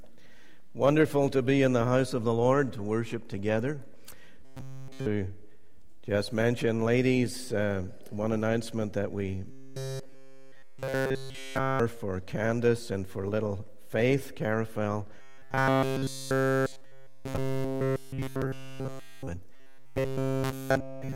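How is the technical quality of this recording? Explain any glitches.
Four stretches of robotic sound from repeated short buffers mar the recording: 4.45–5.06 s, 9.51–11.80 s, 15.2–19.29 s and 19.54–21.15 s. In each, essentially all the sound becomes a rigid, metallic buzz at 133 Hz. The likely cause is a fragment of about 7.5 ms being replayed in place of missing audio. A spectrogram would show evenly spaced harmonics of 133 Hz, and a waveform would show an identical short cycle repeating throughout each stretch.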